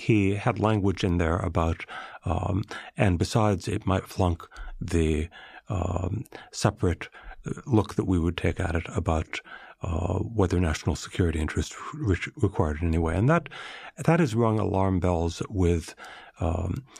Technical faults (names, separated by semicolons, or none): none